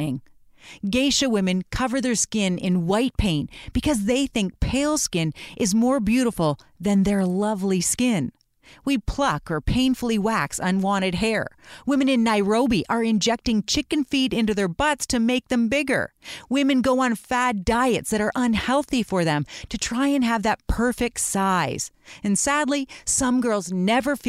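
Nothing in the recording stood out as a technical fault on listening.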